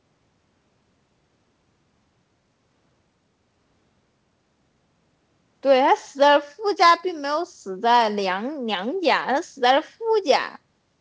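No technical faults can be heard anywhere in the speech. It has come through a WebRTC call path whose codec leaves nothing above 8 kHz, which fits G.722 wideband coding working as intended.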